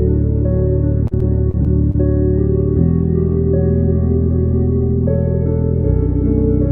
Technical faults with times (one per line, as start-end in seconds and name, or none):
1.07-1.96 repeated packet loss (robotic sound)